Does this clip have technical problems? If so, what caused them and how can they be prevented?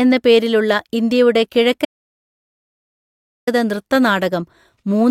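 Yes. An audio dropout to silence runs from 1.85 to 3.47 s, removing about 1.6 s of speech; the input was likely lost while recording continued, so the waveform is a flat line and the spectrogram is blank, without even room tone. Secure connections and monitor levels while recording.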